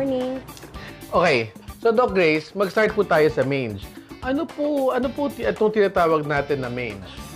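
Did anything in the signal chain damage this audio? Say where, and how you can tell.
No, nothing in the signal chain has audibly damaged this audio. No stage from capture through playback leaves a mark that can be heard anywhere in the clip.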